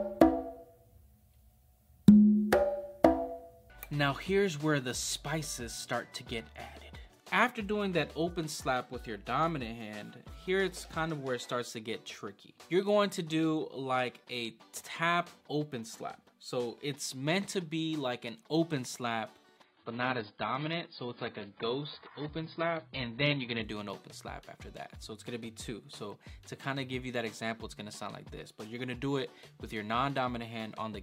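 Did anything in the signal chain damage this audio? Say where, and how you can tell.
Yes. An adaptive stream at a lower bitrate runs from 19.64 to 23.64 s, a network-stage fault. For those four seconds the top end disappears, with nothing above 5 kHz, and the texture turns smeared and warbly. Both changes switch in and out abruptly with no gap. The player dropped to a much leaner rendition while throughput sagged, and the band limit and artefact level suggest an AAC stream falling to roughly 16 kbit/s before returning to full quality.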